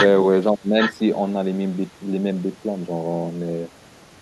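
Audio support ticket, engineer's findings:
Speech suppressed in double talk, 0.52–1.02 s. Echo canceller likely failed to separate near talker from loudspeaker echo during overlap and attenuated both. Speech dips roughly 25 dB at deepest, fragmenting across about 0.4 s of that window.

Echo leak, 0.81–0.92 s. Far-end canceller likely left residual loudspeaker pickup, returned to sender. Brief delayed copy of the speech, lagging about 0.83 s, only a few dB below live speech, overlapping the suppressed stretch.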